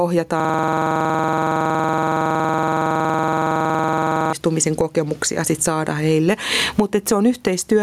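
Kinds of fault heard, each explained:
gain pumping: The level is pulled down under each loud syllable, a level swing of about 10 dB across the whole clip. This is likely excessive input gain with a fast limiter clamping down.
system hang loop: From 0.4 to 4.33 s, one 46 ms slice of audio repeats exactly at 21.5 Hz, giving a rapid rattling stutter, which fits a 2048-sample buffer replaying while the system froze. Unlike echo or delay, the repeats never fade or change.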